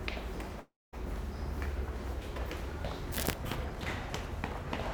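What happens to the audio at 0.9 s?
At 0.9 s the audio sits inside a gap from 0.59 to 0.95 s that sounds like a long network dropout, likely caused by lost packets. About 340 ms of sound is missing. The receiver stretches the last sound into a fading buzzy hiss, then leaves about 230 ms of silence, which covers 0.9 s. On a spectrogram the last frame smears into a decaying band and then goes blank. The waveform tapers off to flat before the sound returns.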